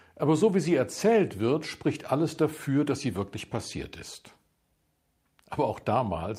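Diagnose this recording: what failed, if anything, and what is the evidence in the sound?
Nothing in the signal chain shows a failure: level, continuity and timing hold steady across the recording, with no dropouts, clipping, discontinuities or rate errors to point to any stage.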